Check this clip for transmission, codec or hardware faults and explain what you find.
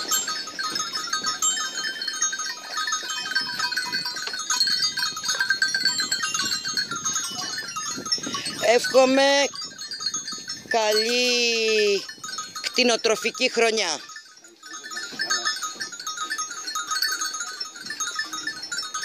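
One fault stands out, at 2.05 s: a dropped buffer (overrun). The likely cause is that the recording software fell behind and failed to read a block of samples before the hardware overwrote it with new input. That block, about 20 ms of audio, is simply missing, and the material on either side is butted together with no gap. You hear the sound jump slightly forward at the splice instead of continuing smoothly.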